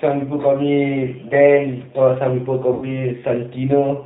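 Speech carried through a G.729 codec throughout, its rough, slightly synthetic texture pointing to an 8 kbit/s link, with a spectrogram showing nothing above 4 kHz. From 2.74 to 3.02 s, VoIP packet loss concealed by the speech codec stretches the sound into a fading, extrapolated tail, consistent with about 80 ms of lost audio; the waveform shrinks.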